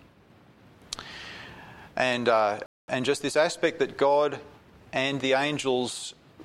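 Playback stall at 2.66 s: the sound drops out to silence for 0.22 s and then resumes, likely because the player briefly ran short of buffered data.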